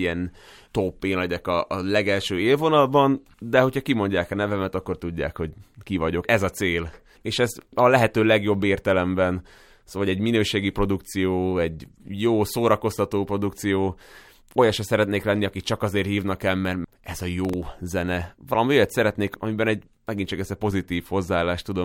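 It's a speech recording with one real problem: a burst of processor overload crackle from about 17.45 to 17.63 s, right after "el mert ez a". The processor couldn't finish a handful of tiny buffers on time. The gritty tearing suggests very short buffers, just under a millisecond each. Each missed deadline replayed a scrap of old audio with hard edges, and the run of them rides on top of the speech until the load clears.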